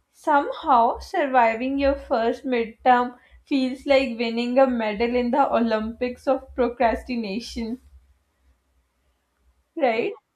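No technical faults can be heard anywhere in this speech recording.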